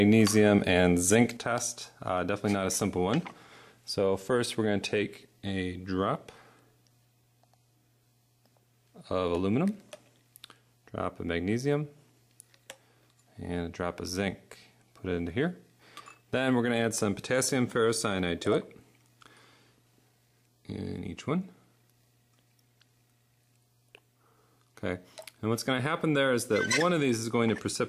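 At 1.37 s the sound abruptly drops by about 6 dB and stays there until the end, the signature of one channel dropping out, likely one stereo side lost before the mono sum. Unlike a plain gain cut, anything carried only by the missing side vanishes entirely.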